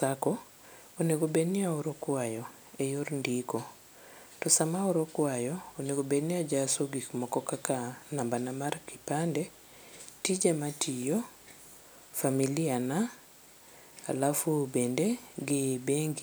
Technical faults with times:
6.54 dropped samples

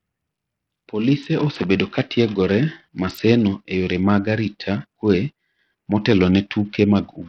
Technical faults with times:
0.00-7.29 Bluetooth SBC compression

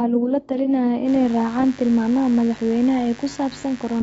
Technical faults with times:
0.00-4.03 AAC compression
1.04-4.03 mains buzz

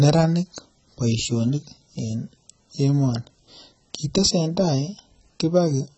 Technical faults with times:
0.00-5.97 AAC compression

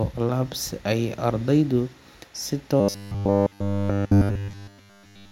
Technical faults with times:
2.80-5.31 robotic sound from repeated short buffers

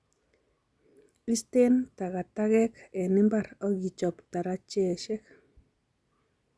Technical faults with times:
none

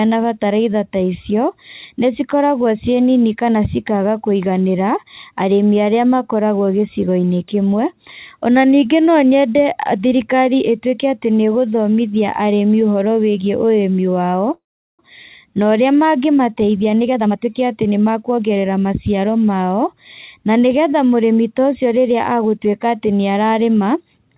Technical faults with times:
14.54-15.02 call audio freeze
16.57-18.65 jitter buffer speed-up

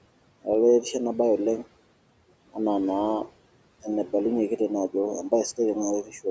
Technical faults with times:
0.00-6.30 noise suppressor artifacts
6.03-6.25 speech cut by the noise suppressor

